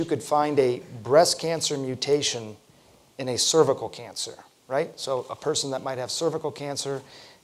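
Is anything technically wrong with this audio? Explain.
No, no technical faults detected.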